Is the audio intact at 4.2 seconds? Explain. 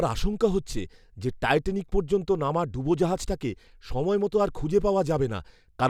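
Yes, at 4.2 seconds the speech plays through intact, with no dropout, click, distortion or other fault at that moment.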